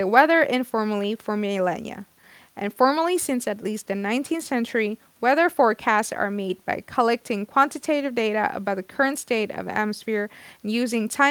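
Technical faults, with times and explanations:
Listening through this speech recording, nothing stood out as a technical problem.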